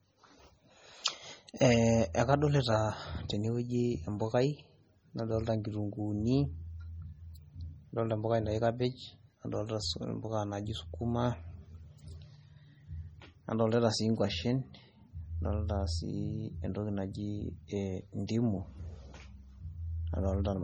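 A speech recording carries heavy MP3 compression from start to finish, most likely from an encoder starved of bits, at a rate that fits about 32 kbps. The voice sounds watery and swirly, s sounds chirp metallically, and consonant attacks smear as weak spectral lines flicker on and off between frames. What separates it from plain low-pass filtering or noise reduction is that fluttering, frame-by-frame texture; separately, nothing survives above 20.9 kHz.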